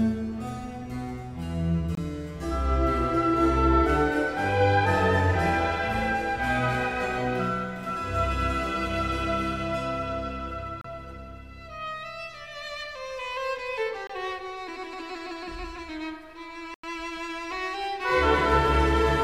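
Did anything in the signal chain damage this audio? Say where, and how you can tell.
Yes: blocks of digital silence at 1.95–1.97, 10.81–10.84, 14.07–14.10 and 16.74–16.83 s, each cutting out and back with no fade. Buffer underruns, fitting 1024- and 4096-sample blocks left unfilled.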